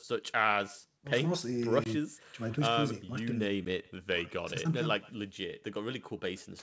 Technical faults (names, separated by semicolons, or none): echo with no canceller; packet loss on an ADPCM call